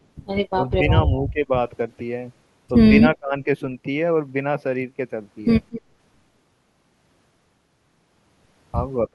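The clip is speech with three kinds of echo-canceller fault. Speech is suppressed in double talk three times. It dips at 0.53 to 0.58 s and 1.27 to 1.51 s, by roughly 15 dB. At 3.01 to 3.35 s it drops far deeper, by around 30 dB. The likely cause is an echo canceller that could not separate this talker from the far side and turned both down. At 5.71 to 5.81 s there is an echo leak. A faint, short copy of the voice returns 237 ms late, roughly 15 dB below the speech. A loudspeaker echo was likely not fully removed and was sent back. Right after, at 5.82 to 5.94 s, the background is gated by the echo canceller. The room sound dips by about 6 dB for about 100 ms. The canceller pulled the microphone down while the loudspeaker played, then released it.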